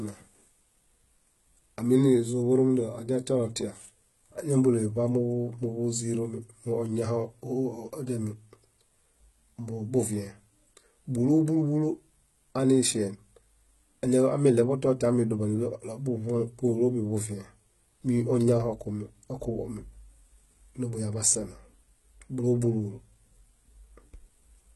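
All the way through, the top end sounds bright but not quite real: s sounds come out gritty and a bit lispy, with nothing at all above about 11.8 kHz. That's most likely heavy HE-AAC compression at a very low bitrate, somewhere around 16 kbps. The codec keeps only the lower spectrum and fakes the treble by copying lower bands upward, so the harmonics don't line up across the crossover.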